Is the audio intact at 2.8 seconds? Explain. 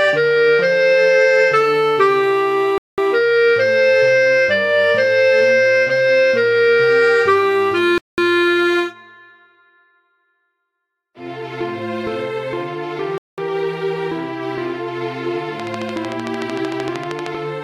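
No. At 2.8 seconds the sound falls into a gap between chunks, a hard-edged hole running from 2.78 to 2.98 s. It lasts 200 ms. The audio arrives in pieces of about 5 s each. Silence fills the join. Nothing is dropped from the sound itself. It simply stops abruptly and resumes just as abruptly a fifth of a second later.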